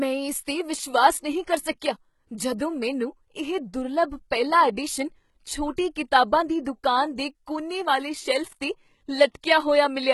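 The clip is speech with heavy codec damage from start to finish, likely from HE-AAC compression. Nothing is left above about 11.8 kHz. The damage fits a very low bitrate, around 16 kbps. Only the lower spectrum seems truly coded. The upper band is rebuilt by spectral band replication, with lower bands copied upward and shaped by a coarse envelope. So the treble is synthetic, and its harmonics fail to line up with those below the crossover.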